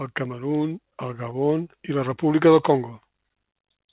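Around 1.30 to 1.33 s there's a short concealed packet loss: roughly 20 ms of the speech never arrived in time, so the receiver stretched the last sound to cover the gap, leaving a quick smear or wobble on the narrowband call audio, which tops out near 4 kHz.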